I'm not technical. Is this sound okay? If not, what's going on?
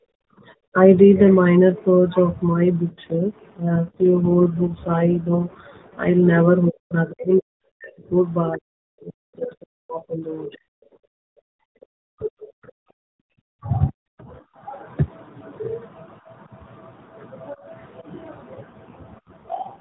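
No. The speech keeps sinking or breaking up in pieces at 0 to 0.8 s, 6.7 to 10.7 s, 12.0 to 12.9 s and 13.5 to 14.3 s. This is likely speech suppressed in double talk: both sides spoke at once, and the call's echo canceller turned this talker down along with the echo.

From 3.0 to 6.1 s, and again from 18.6 s to the end, the voice turns rougher, buzzier and more artificial without any gap. This is an AMR rate drop: a weak mobile signal pushed the phone codec into a low-quality mode.

Between 11.0 and 11.7 s the room sound behind the voice drops away almost completely, then returns. This is background gated by the echo canceller, which muted the microphone hard while the other side's audio was playing.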